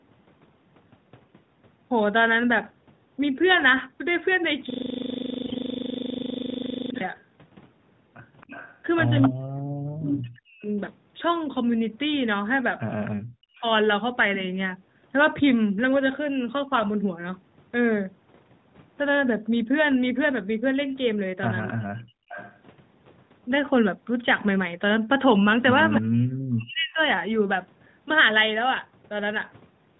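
From 4.70 to 7.01 s a system hang loop takes over: the computer or driver stalled while the sound hardware kept replaying one 40 ms stretch of its buffer, about 58 times. That exact repetition at 25 Hz gives a rough, rattling buzz rather than a clean tone or a slower stutter, and its perfect sameness sets it apart from any network glitch.

Inside that loop, from 5.46 to 5.58 s, AMR bit errors hit roughly six codec frames at a bit error rate of a few percent. Flipped low-priority bits misplace the excitation pulses and skew gain and spectral values, so pitch and level hold roughly steady while the sound turns hoarse and gargly. Dropouts would bring gaps instead.

At 9.27 to 10.66 s the speech dips by as much as about 40 dB for around a second. This is likely speech suppressed in double talk: with both sides talking, the echo canceller couldn't separate near speech from loudspeaker echo and ducked everything. 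The talker fades or chops out rather than gaining a second copy.

At 13.05 to 13.10 s a brief echo leak appears, a faint copy about 20 dB down arriving 273 ms late, likely from a loudspeaker path the canceller didn't fully clean. Suppression follows from 13.13 to 13.64 s, again cutting up to about 40 dB over roughly half a second.

From 21.67 to 22.59 s the delayed 273 ms echo returns louder, about 15 dB below the speech, audibly repeating earlier sound rather than adding noise. Within it, from 22.01 to 22.29 s, the background is gated by the echo canceller: the room sound drops by about 37 dB for roughly 0.3 s and comes back once the canceller releases. Only the ambience vanishes, not the speech itself.

From 25.93 to 27.06 s the echo leak is strongest, about 10 dB down at the same 273 ms delay. From 25.98 to 26.99 s the near speech is also suppressed by up to about 40 dB, so the echo sits over a ducked talker.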